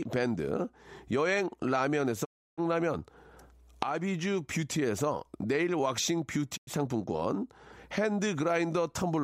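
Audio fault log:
2.24–2.60 s and 6.56–6.69 s, digital broadcast dropout: speech fades out within 20 ms into silent holes of 320 ms, then 96 ms, and resumes further on. The receiver muted over missing or corrupt frames, consistent with ten and three lost 32 ms frames, so that audio is gone.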